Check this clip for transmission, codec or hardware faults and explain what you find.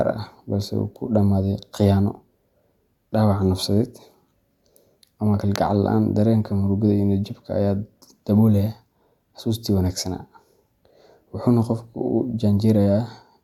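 No transmission, codec or hardware faults turn up anywhere in this clip.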